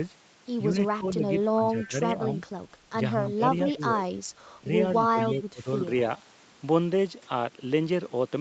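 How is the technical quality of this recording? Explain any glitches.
The recording has three kinds of glitch.

Speech suppressed in double talk at 0.98–1.24, 1.53–1.96, 3.18–3.45, 3.73–4.04 and 5.08–5.66 s: likely an echo canceller ducking both talkers. The voice sinks about 10 to 25 dB, visible as waveform notches.

Echo leak at 1.78–1.87, 3.70–3.75 and 5.21–5.36 s: a faint copy of the voice trailing by 226 ms, about 20 dB down. It is likely loudspeaker pickup the canceller missed, appearing as ghost spectrogram traces.

Input switched to a poorer device at 5.81 s, likely a microphone change. With no gap, the level shifts about 5 dB, and noise appears about 35 dB down. Energy stops at 8 kHz, the call path's ceiling.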